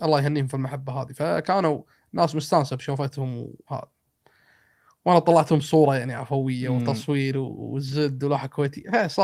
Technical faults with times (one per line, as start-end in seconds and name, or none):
7.87-7.93 lost packet rebuilt from error correction